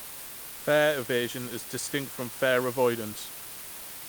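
Speech reduced to low bit depth with dither, about 5 bits, with dither added before rounding, so the quantisation error becomes a constant, even hiss only about 10 dB below the voice, throughout.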